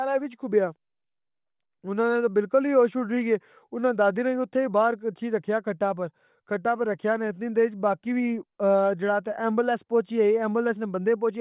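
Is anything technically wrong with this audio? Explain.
No, nothing technically wrong turns up in this speech recording; it all sounds just as it should.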